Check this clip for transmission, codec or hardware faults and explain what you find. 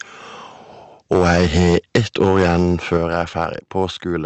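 Two hardware-side faults are audible, both on the capture end rather than in transmission.

From 1.12 to 3.45 s there is microphone overload. The input level was likely set too high, driving peaks about 8 dB past what the converter can represent, so their tops are flattened. A few percent of samples end up clipped. The loudest syllables in this stretch pick up a harsh, crackly edge, and the cut-off waveform adds gritty distortion over the speech.

At 1.96 s the microphone volume is stepped down. This is most likely the call software reacting to the clipping by lowering the device's input gain in a single jump. Speech and background both drop by about 2 dB at that instant, a small but abrupt fall in level in the middle of the distorted passage. Clipping continues after the step, since the reduction is smaller than the overload.

The Opus call path limits the audio to 8 kHz. That band-limiting is normal for the path and not a fault.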